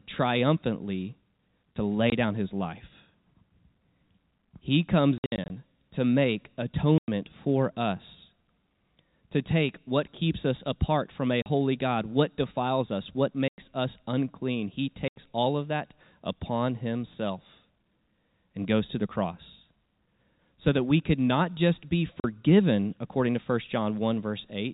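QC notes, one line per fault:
2.10–2.12, 5.18–5.50, 6.98–7.08, 11.42–11.46, 13.48–13.58, 15.08–15.15, 22.20–22.24 s: packet loss filled with silence. Hard-edged dropouts of 20 to 100 ms, all multiples of 20 ms, which fits 20 ms packets. The gaps fall between "to make" and "for us", after "us apart from a", and between "what defiles us what" and "us unclean". The 5.18–5.50 stretch is a scattered cluster with gaps of up to 60 ms. The abrupt cuts are heard over the 4 kHz telephone band.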